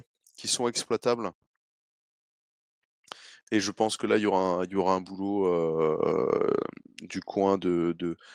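Nothing in this speech clip stood out as a technical fault on listening.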